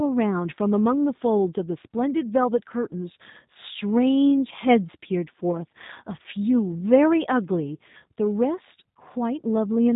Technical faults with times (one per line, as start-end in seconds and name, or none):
0.00-9.96 G.729 codec